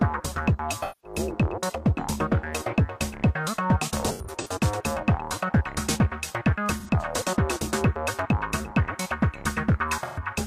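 AAC frame loss with concealment strikes at 0.82 to 1.19 s, 4.11 to 4.51 s, 6.80 to 6.90 s and 10.03 to 10.22 s. The decoder patches each gap of 85 to 213 ms from the last good spectrum, leaving smeared, noisy, phasey stretches. Near 4.1 s these come in scattered bursts, the longest about a tenth of a second.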